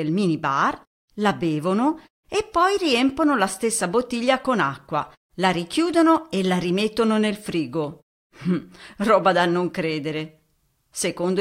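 Nothing technical goes wrong anywhere in this speech recording, and even where the background falls away to silence between phrases the sound comes back in good time for what follows.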